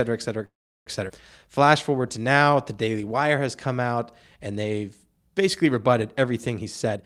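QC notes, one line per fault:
0.45–0.88 s, call audio freeze: the speech halts and its last sound trails off briefly, then about 360 ms of silence, before resuming exactly where it stopped, with nothing lost. It is likely a late-packet stall that emptied the buffer, adding about 410 ms of delay, unlike a skip, which removes audio.
1.08 s, skip ahead: playback jumps forward almost seamlessly, with only a 10 ms join, and roughly 200 ms of speech is gone. Later audio was already waiting, so the dropped stretch shortens the delay instead of inserting a pause, the opposite of a freeze.
1.38–3.40 s, jitter buffer slow-down: the speech drags at about 90% speed, stretched by 220 ms in total through repeated single pitch periods and pause fragments. Pitch stays put, which separates it from a tape-style slowdown, and vowels sound drawn out.
6.59–7.04 s, jitter buffer speed-up: the closing speech rushes at about 149% speed as roughly 200 ms of short pitch-period pieces are cut out to shed surplus buffered audio. 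Pitch does not rise, so it sounds hurried rather than chipmunk-like, unlike a sample-rate error.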